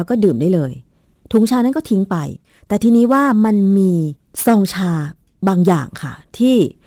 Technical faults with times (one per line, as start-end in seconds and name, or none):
none